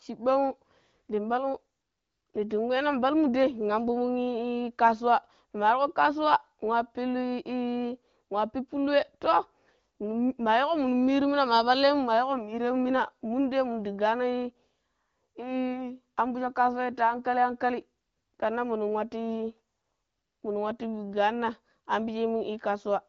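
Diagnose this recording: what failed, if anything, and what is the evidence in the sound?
Nothing has failed: the speech passes through an AMR wideband (HD Voice) codec at 15.85 kbit/s, which codes it clearly with only light codec damage, and the audio stops at 7.1 kHz, as that codec's bandwidth dictates.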